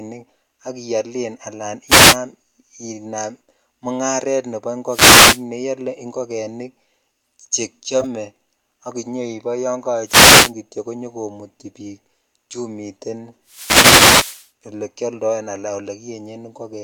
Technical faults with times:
1.87-2.17 wireless microphone noise hit
4.86-5.44 wireless microphone noise hit
8.00-8.05 corrupt frame decoded
10.05-10.53 wireless microphone noise hit
13.45-14.51 wireless microphone noise hit
14.09-14.15 corrupt frame decoded

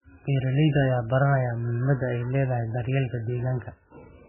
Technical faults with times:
0.00-4.28 MP3 compression

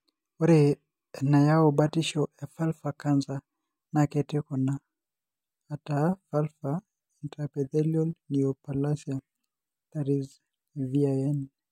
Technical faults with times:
none

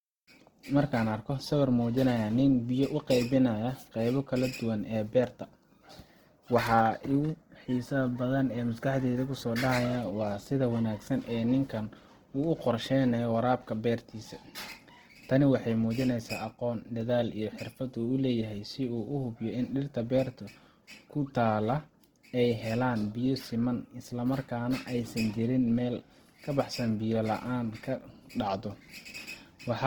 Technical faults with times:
0.00-29.86 Opus compression

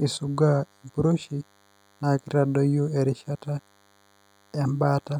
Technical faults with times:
0.00-5.20 DECT cordless phone buzz

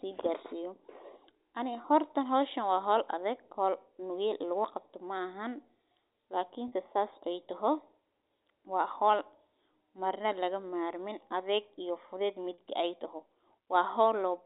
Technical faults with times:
1.82-1.84 packet loss with pitch repetition
6.68-6.72 packet loss with pitch repetition
12.54-12.58 packet loss with pitch repetition

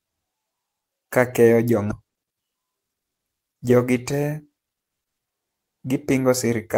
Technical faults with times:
1.91-1.93 skip ahead

